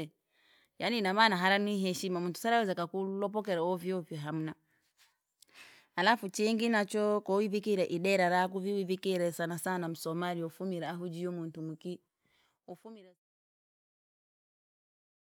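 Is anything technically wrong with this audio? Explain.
No, the speech signal is technically sound, and the level eases down in a smooth, deliberate fade-out beginning around 12 s and reaching silence at 13.27 s without any click or hard edge.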